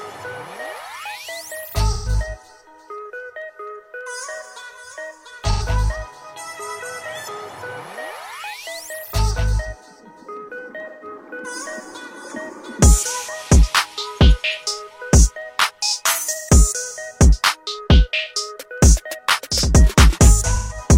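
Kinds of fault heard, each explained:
AAC frame loss with concealment: five short gaps, 85 to 170 ms, patched from the last good spectrum, leaving smeared, phasey blips.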